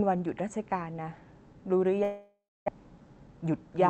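At 1.93 s a doubled audio track begins and runs to the end of the clip. A second full-band copy of the speech trails the original by around 0.4 s. It sits about 5 dB quieter. It cuts in abruptly, with no fade. It has no reverb tail or room colour, so it sounds like a hard slapback echo. The likely cause is the signal being captured twice, once through a slower path.

From 2.03 s to 2.70 s there is a long network dropout. The receiver fills the gap by stretching the last sound into a buzzy hiss, which fades out. The final 0.26 s or so of the gap is plain silence. About 0.6 s of audio never arrives. When the sound resumes, that part is simply missing, and playback timing has shifted slightly. The likely cause is a stall in packet delivery. The speech around it carries Opus coding texture, with nothing above 8 kHz.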